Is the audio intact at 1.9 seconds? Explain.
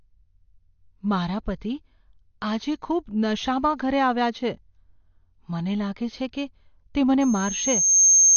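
No. At 1.9 seconds, as across the whole clip, the speech sounds dull and smeared, with nothing above about 6.7 kHz and a warbling, fizzy edge on sustained sounds and sibilants. The likely cause is AAC compression, probably AAC-LC at a low rate that fits about 32 kbps. The encoder quantises each frame's frequency lines coarsely against a hearing model, lowering the cut-off and leaving holes or substitute noise in the upper bands.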